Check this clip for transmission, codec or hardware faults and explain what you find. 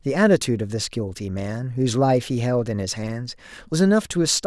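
Nothing faulty can be heard in this speech recording.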